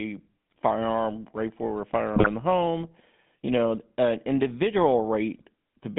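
A speech recording passed through the GSM full-rate codec, which rebuilds the vocal tract from a pulse-driven excitation sampled coarsely and fits a 13 kbps stream; the band is held to roughly 150 Hz to 3.6 kHz, and the voice carries a plainly audible buzzy, gravelly roughness throughout. Corrupted bits then reached the decoder as GSM bit errors, scrambling filter, pitch or gain values so the spectrum twists or the level jumps, heard as squawks and gargling bursts at 0.50 to 0.58 s, 2.14 to 2.28 s and 5.31 to 5.42 s, each span fitting a handful of damaged frames.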